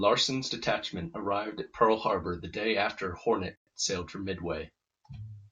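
At 3.56 s the speech drops out for about 111 ms, to 3.67 s, a gap at a join of encoded pieces. The audio was encoded in separate chunks, roughly 4 s long, and joined without trimming the encoder's start-up delay and final-frame padding, leaving a short hole before the speech resumes exactly where it broke off. On a waveform it shows as a flat stretch. A spectrogram shows a blank vertical band across all frequencies, its edges slightly smeared.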